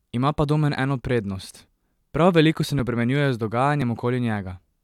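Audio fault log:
1.77 to 3.82 s, periodic USB or driver dropouts: just after "eno prednost", about three ticks fall every 1.02 s as something stalls the USB bus or audio driver and roughly 2 ms of speech is skipped outright, leaving small splices heard as regular clicks.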